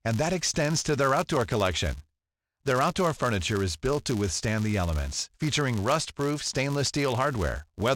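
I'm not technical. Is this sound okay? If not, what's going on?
No. A filter restarted on every block: it forgets its state each time and starts fresh, which fits a 256-sample block. Each restart leaves a tiny tick, 188 times a second, so a buzz rides along with the speech throughout, louder where the speech is louder.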